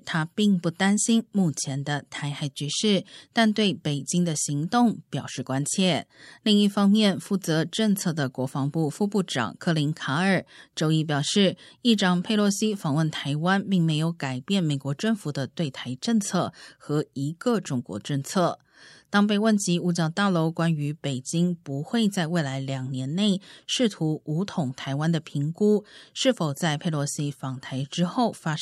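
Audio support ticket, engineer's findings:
No audible faults found in this speech recording.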